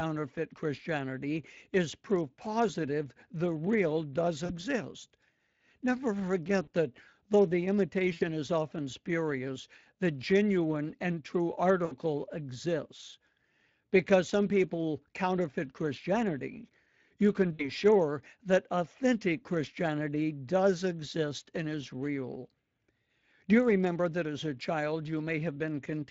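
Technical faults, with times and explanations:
Throughout: Speex codec at about 20.6 kbps, plainly audible. Sparse excitation bits leave the speech hoarse and noisy.
4.45 to 17.69 s: VoIP packet loss concealed by the speech codec, at 4.45 s after "positive the real does", 6.63 s, 8.13 s before "is often spurious the", 11.85 s, and 17.53 s between "you can" and "sure that authentic". Each gap covers 40 to 80 ms of lost packets. The decoder extends the last pitch and filter into a fading buzz or coloured noise, and the speech stays weakened briefly afterwards.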